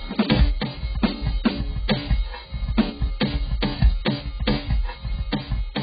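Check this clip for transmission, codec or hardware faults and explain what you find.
The music carries heavy codec damage for its whole length, most likely from AAC compression. Nothing is present above about 4.9 kHz, and what remains sounds dull and smeared, with a warbling, fizzy texture on held tones. AAC-LC starved of bits, which fits roughly 11 kbps, drops its upper bands and quantises the rest coarsely, leaving holes or noise-filled patches. A plain low-pass filter would cut the top just as cleanly but leave the surviving band steady, without this shimmering grain.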